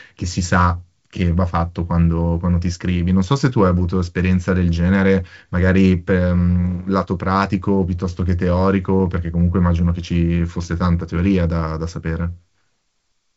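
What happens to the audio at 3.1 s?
Nothing goes wrong at 3.1 s: the speech passes through intact, carried by G.722 wideband telephone coding with its band limit near 7.7 kHz.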